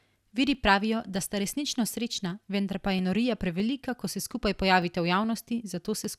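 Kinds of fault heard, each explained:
Clock drift buffer slips: A click recurs through the speech every 0.61 s, from 0.55 s to 6.05 s, about ten in all. The likely cause is two devices running on separate clocks that disagree by several hundred parts per million, so the buffer between them drifts until roughly 15 samples are dropped or repeated. The strictly even spacing distinguishes this from packet-loss dropouts, which fall at irregular moments and leave audible gaps.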